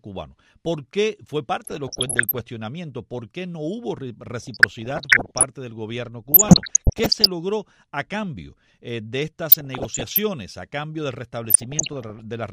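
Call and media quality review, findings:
DAB burbling, five bursts: 1.64–2.40 s, 4.42–5.43 s, 6.32–7.28 s, 9.51–10.18 s, 11.45–12.19 s. Weak DAB reception leaves residual bit errors after error correction, worst near 1.64 s at around 1 percent, lighter later. Corrupted MP2 samples put short noise blips in single sub-bands; corrupted scale factors make sub-bands jump in level for up to a frame. Result is burbling in each burst.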